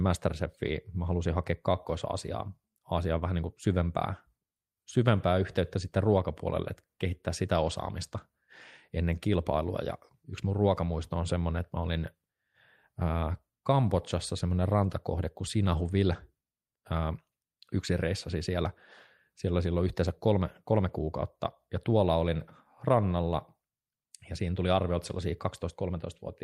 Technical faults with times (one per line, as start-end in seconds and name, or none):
none